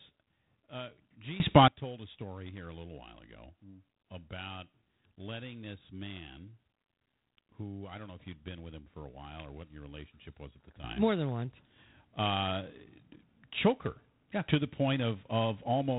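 A harsh, rasping hiss rides on the speech throughout, and nothing passes above 3.9 kHz. That points to G.726 ADPCM at a reduced rate, which fits 24 kbit/s, with coarse prediction-error coding.

From 1.4 to 1.68 s, just before "told a story here", the level abruptly leaps about 21 dB, likely a sudden gain jump applied without a ramp. Then from 10.84 s, right after "relationship was at the", speech and background jump together by about 11 dB and stay there to the end, again likely a sudden gain jump.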